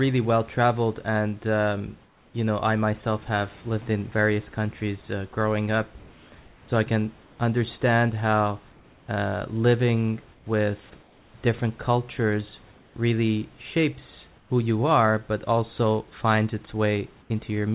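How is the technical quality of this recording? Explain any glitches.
The recording is narrowband speech with a background that keeps going synthetic in the pauses. Nothing is heard above 4 kHz, which fits a G.711 telephone codec. Room noise sits about 31 dB below the speech.

Comfort noise in place of the background occurs at 2.06–2.34 s, 5.98–6.32 s (after "countries uh growing up"), 8.72–9.08 s (after "I can understand how"), 10.34–10.46 s, 11.02–11.34 s, 12.72–12.96 s, 14.38–14.50 s (before "you are but also") and 17.22–17.30 s. Each gap lasts 80 to 360 ms. The sender likely stopped transmitting during pauses. The receiver then filled them with generated noise. The real room texture turns flat and featureless, mostly about 2 to 4 dB quieter.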